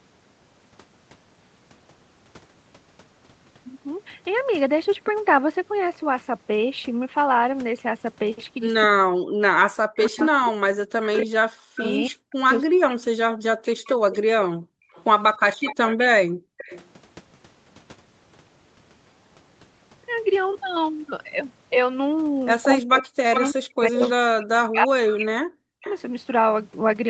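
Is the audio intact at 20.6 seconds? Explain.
Yes, the speech at 20.6 seconds is intact, with no dropout, glitch or other fault at that moment.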